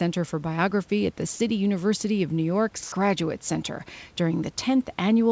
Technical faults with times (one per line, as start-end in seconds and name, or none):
1.34-1.40 sound dropped by the voice detector
2.84-2.92 comfort noise in place of the background